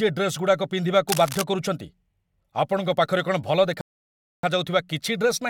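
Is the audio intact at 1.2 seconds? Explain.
No. From 1.08 to 1.42 s, cable scratch noise, likely from a worn cable or connector shifting, lays dense, uneven scratching bursts over the speech, only about 5 dB below it.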